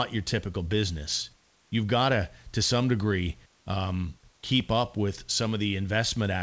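No faults can be heard anywhere in this speech.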